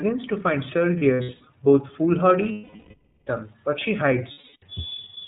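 Speech coded with the iLBC codec, a narrowband VoIP codec, which cuts everything above 4 kHz and leaves the voice plainly rough and synthetic. That dull, band-limited quality is steady throughout, unlike noise or distortion that comes and goes, and fits the 13.33 kbps mode with 30 ms frames. Lost iLBC frames break in three times. From 0.98 to 1.48 s, after "to find", about 240 ms is lost in scattered short gaps over 480 ms, none longer than roughly 70 ms. From 2.52 to 3.28 s, just before "but she", a single 750 ms gap occurs. From 4.31 to 4.63 s, after "but she", a 300 ms gap occurs. In each gap the decoder repeats the last pitch cycle mixed with noise, so the gap sounds like a held, buzzy vowel that fades over the longer losses rather than dropping to silence. Because each iLBC frame stands alone, the voice is clean again almost at once, with no smeared recovery afterward.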